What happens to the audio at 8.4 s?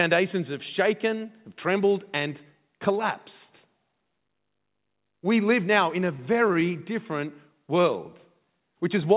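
Right after "different world", from 8.35 to 8.58 s, the speech drags to about 82% speed at unchanged pitch, sounds stretching out. This is a jitter buffer slow-down: the receiver repeated single pitch periods to rebuild its reserve, adding 50 ms.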